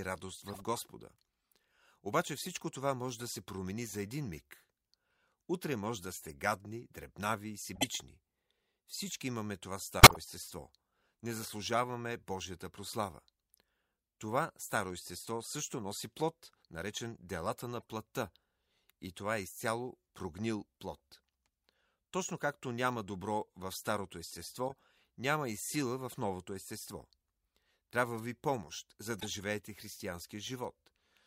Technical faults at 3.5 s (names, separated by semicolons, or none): none